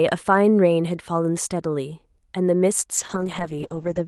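From the start the speech runs through an Opus call path with audio extending to about 12 kHz. At 2.95 s a call bitrate drop sets in and lasts to the end of the clip. The top end narrows to 8 kHz, so the speech turns muffled, and coarser coding gives it a rough, watery texture that holds for about the last 1.06 s. This fits the encoder being cut from around 40 kbps to roughly 8 kbps after the call's bandwidth estimate fell.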